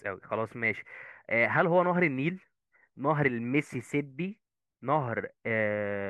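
From 3.81 to 4.57 s the speech suddenly runs 5.8% fast and sits nearly a full semitone sharp, then snaps straight back. That's a drift correction step, likely a clock-matching resampler jumping its playback rate for a moment to rebalance its buffer.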